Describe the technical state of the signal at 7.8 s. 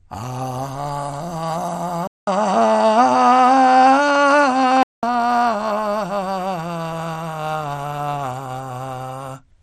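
At 7.8 s the music carries MP2 compression damage, present across the whole clip. The most likely cause is MPEG Layer II coding short of bits, consistent with roughly 64 kbps, which shuts off upper sub-bands and coarsely quantises the rest. It sounds dull and gurgling. A spectrogram shows nothing above 14.3 kHz, with upper bands flickering in and out.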